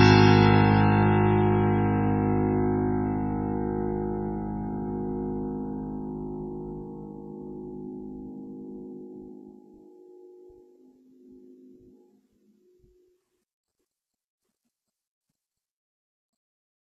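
Throughout, the music was likely passed through one low-bitrate lossy codec and then re-encoded by another, producing transcoding between lossy codecs: layered artefacts from both codecs, with nothing above 14.3 kHz.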